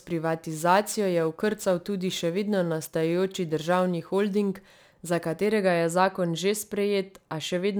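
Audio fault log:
0.00–5.46 s, crude rate conversion: the speech carries a gritty, inharmonic fizz that rides on loud and bright syllables and stops just before "je zakon že". It sounds like a 48 kHz to 44.1 kHz change done by simply picking the nearest sample, so about one sample in twelve is dropped in a fixed cycle. That periodic timing error produces tones unrelated to the voice, sitting roughly 30 dB below it. Unlike plain aliasing, the grit follows this repeating drop pattern, not just the high frequencies.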